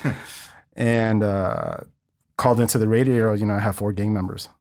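At 0.91 to 1.09 s, before "uh called into the", and 3.19 to 3.29 s, before "you know I", lost packets are rebuilt from error correction. Low-bitrate copies fill the gaps, so the sound turns briefly rough and noisy.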